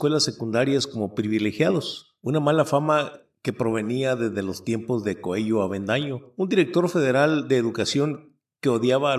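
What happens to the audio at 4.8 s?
Nothing goes wrong at 4.8 s; the audio plays through that moment intact, with no dropout, click or other fault.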